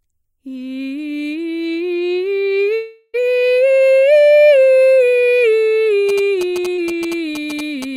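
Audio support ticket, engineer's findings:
Long network dropout, 2.75 to 3.16 s. The music is replaced for about 0.38 s by a fading continuation of the preceding sound, with no hard silence. Playback resumes later in the material, with that stretch missing. Likely cause: the network path stalled and the receiver's concealment extended the last audio across the whole gap.

GSM signalling bursts, 6.09 s to the end of the clip. A galloping dit-dit-dit of short 217 Hz buzzes, about 15 dB below the music. Probable component: the analogue input or cable rectifying radio bursts from a nearby 2G handset that is signalling rather than in a call. Fix by moving the phone away or shielding the input.

Short concealed packet loss, 6.76 to 6.79 s, inside the GSM interference. A brief smear of about 20 ms. The jitter buffer or decoder never received that audio in time, so it extrapolated the previous sound and crossfaded back into the real audio.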